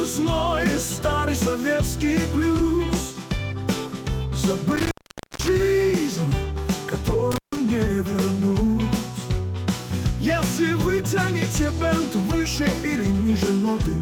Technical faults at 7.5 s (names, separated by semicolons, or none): intermittent contact